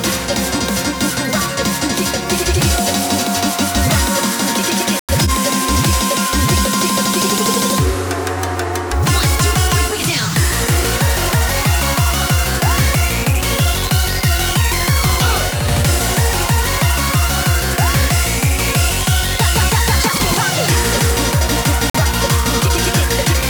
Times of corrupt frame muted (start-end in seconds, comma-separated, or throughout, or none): 4.98-5.30, 21.90-21.97